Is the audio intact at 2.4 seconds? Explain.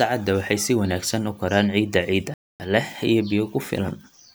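No. At 2.4 seconds you're right in the middle of a playback stall that runs from about 2.34 to 2.60 s, so roughly a quarter of a second of dead silence cuts into the speech mid-flow. The likely cause is the player starving for data or having its output thread held up, so nothing reaches the output until it catches up. After the gap, the speech simply picks up again.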